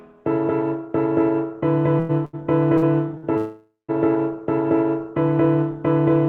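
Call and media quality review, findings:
Short stalls from late packets at 1.99, 2.25, 2.77 and 3.17 s. Last sound held about 50 to 100 ms with a faint buzzy dip, then it carries on from the same spot, nothing lost. Jitter buffer ran dry waiting on each packet; receiver stretched audio to cover.

Call audio freeze at 3.37 to 3.91 s. About half a second where the sound smears into a fading buzz, ending in roughly 150 ms of silence, then resumes right where it stopped. Likely packets held up in transit, draining the jitter buffer; Opus path's top end stops around 12 kHz throughout.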